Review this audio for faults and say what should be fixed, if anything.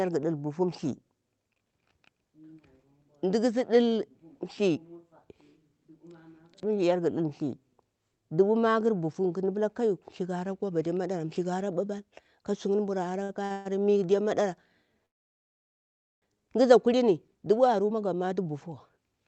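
Two short stalls from late packets occur at 13.23 to 13.31 s and at 13.45 to 13.52 s. A packet arrived late, so the receiver held the last sound for 55 ms, then 50 ms. Nothing is lost, but the sound drags briefly. A deeper jitter buffer would absorb these late arrivals.

A call audio freeze follows at 13.52 to 13.70 s, a held buzz of 132 ms. A second, at 15.06 to 16.24 s, drops to silence for about 1.16 s. Both likely come from packets stalled in transit. The audio then resumes where it stopped. A steadier network path would prevent them.

A jitter buffer speed-up runs from 17.37 s to the end. The buffer was overfull after the backlog arrived, so the receiver trimmed small pitch-period pieces, roughly 150 ms in all. The sound plays at 108% speed with unchanged pitch and feels hurried. Draining the excess more gradually would prevent this.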